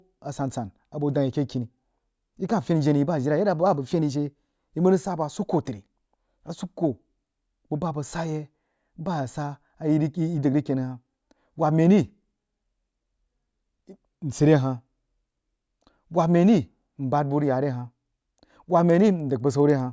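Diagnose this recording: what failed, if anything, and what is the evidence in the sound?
From 17.7 s, right after "bu rig ya re", to the end at 19.93 s, a resampler restarted on every block adds regular ticks at 10 Hz. The 24 kHz to 16 kHz sample-rate conversion processed 100 ms blocks independently, leaving an edge error each time. A spectrogram shows thin vertical broadband lines every 100 ms.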